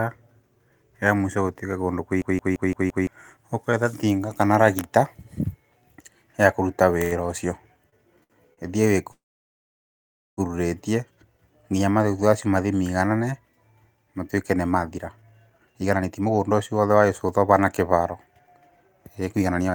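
System hang loop at 2.22 to 3.07 s in this speech clip: a single 170.67 ms slice repeats five times at 5.86 Hz, a machine-gun stutter from the driver freezing while hardware replayed its ring buffer, which fits an 8192-sample buffer, and roughly a second of audio never plays. Short stalls from a late packet at 7.03–7.15, 7.90–7.98, 8.23–8.33 and 8.54–8.60 s: the jitter buffer briefly ran dry, so the last sound is held for 81, 28, 64 and 36 ms before resuming in place, with nothing skipped. Call audio freeze at 9.11 to 10.40 s: the sound stretches and then drops to about 1.19 s of silence, a 1.26 s gap inserted before the audio picks up exactly where it stopped, likely because packets were held up in transit. Jitter buffer speed-up from 14.70 s to the end at 19.74 s: to shed accumulated delay, the receiver repeatedly cut short pitch-period pieces, removing roughly 0.7 s, so delivery runs at 114% speed and sounds hurried while pitch stays unchanged.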